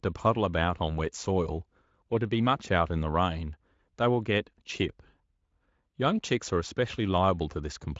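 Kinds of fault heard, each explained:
Nothing here counts as a fault, really; the speech just comes through a speech codec at a roomy setting, with the top end stopping at 7.6 kHz and at most a faint trace of the coding left behind.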